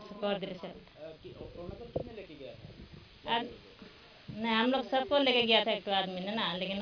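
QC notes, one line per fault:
No faults heard.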